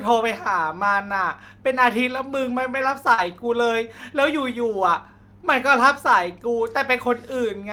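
At 2.73 s, a lost packet is rebuilt from error correction. The next packet carried a low-bitrate copy, so there is no gap. The rebuilt 20 ms sounds rougher and noisier, and the disturbance lasts until 2.86 s.

From 3.14 to 3.20 s comes a short concealed packet loss. About 40 ms never arrived. The decoder extended the preceding sound to fill it, then blended back. It is heard as a brief smear or wobble in the speech.

The same stretch ends with another rebuilt packet, at 3.18 to 3.20 s, and a third follows at 3.28 to 3.30 s. Each is a 20 ms low-bitrate copy. Both add a short patch of grainy, noisier texture.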